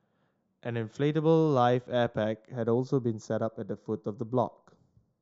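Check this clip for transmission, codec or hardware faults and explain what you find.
One fault is present, in the second half of this speech clip. From 2.52 s to the end the sound turns hollow and phasey, with a fixed dip around 3 kHz. This is channel delay (comb filtering): one channel lags by roughly a fifth of a millisecond, and summing to mono cancels energy at evenly spaced frequencies.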